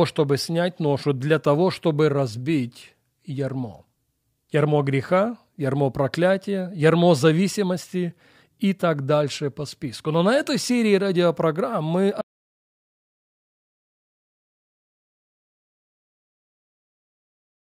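At 12.21 s the speech cuts off abruptly and the audio drops to total silence. This audio dropout to silence runs to the end, 5.53 s. No room tone remains. The input was likely lost while the recorder kept writing silence.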